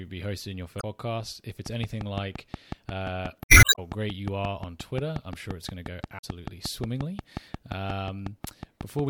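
Speech, hit by three brief bursts of damaged data: from 0.77 to 0.84 s just after "be hosting your", from 3.41 to 3.79 s, and from 6.17 to 6.24 s. These are damaged data in a compressed stream. Corrupted bytes made the decoder misread the frames at those points, lose sync and skip ahead to the next valid frame header. From 1.66 s to 9.00 s a regular ticking of some fifty sharp, near-identical clicks runs at 5.6 per second, sitting around 15 dB above the speech and audible through the pauses as well. This train of clicks most likely comes from electrical interference from nearby equipment or a faulty connection or power supply injecting a pulse at a steady rate.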